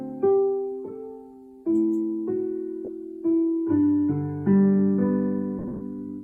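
At 2.85 to 2.88 s, lost LE Audio frames leave about 30 ms missing, which fits three 10 ms frames. The LC3 decoder fills the gap by repeating the last spectrum with random signs, so tones blur briefly into a noisy smear. On a spectrogram, harmonic lines turn to grainy, unstructured energy. From 5.59 to 5.81 s, about 150 ms is lost in bursts across 220 ms. The longest run is around 70 ms and audibly fades toward silence, which shows as a waveform envelope sagging before the sound recovers. Under both dropouts, the light coding of the lossy compression is heard at most as a faint watery texture on noise and attacks.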